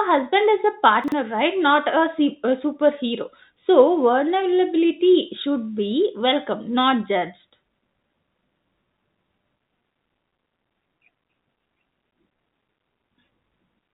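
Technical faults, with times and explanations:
Throughout: clock drift between sender and receiver. The sending clock runs roughly 1.5% slow, so the jitter buffer keeps draining and must be topped up. This steady one-directional pull, rather than random network jitter, explains the recurring small timing hiccups heard over the G.711 band-limited sound, which has nothing above 4 kHz.
0.61–13.28 s: repeated timing corrections. To keep pace with the slow sender, the receiver repeats short pieces, so playback runs at about 99% speed and gains roughly a fifth of a second overall. Nothing is missing, unlike packet loss. The edits are unevenly spaced.
1.04–1.12 s: chunks out of order. One 40 ms chunk arrived late and plays one chunk after where it belongs, creating three hard joins. Unlike a dropout, no audio is lost. The moment sounds jumbled.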